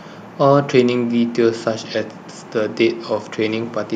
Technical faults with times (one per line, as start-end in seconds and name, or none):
2.14-2.27 echo leak